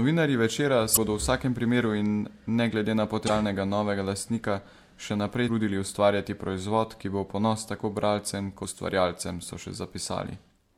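Brief chirps, squawks, clicks or short holes cut through the speech four times, each lasting roughly 40 ms: at 0.93 to 0.97 s, 3.26 to 3.30 s, 5.45 to 5.49 s and 8.61 to 8.65 s. These are the marks of damaged data in a compressed stream. Corrupted bytes leave the decoder unable to interpret those frames, so it loses sync and briefly emits garbage until it finds a valid frame header again.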